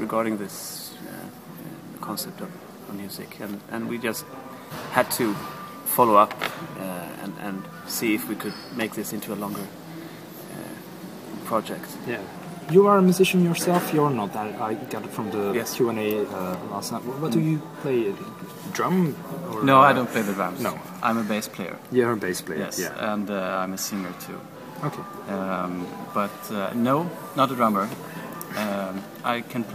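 No technical faults can be heard anywhere in the audio, and the signal holds steady throughout.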